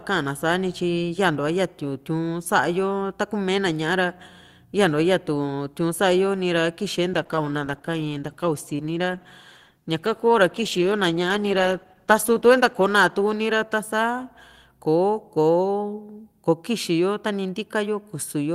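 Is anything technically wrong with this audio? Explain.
Yes. From 7.15 to 16.43 s there is a call bitrate drop: the encoder falls from 48 to 13 kbps and stays at its lowest for about 5.7 s, coding coarsely and trimming the highs. Speech sounds muffled and watery, without the brief gaps of packet loss.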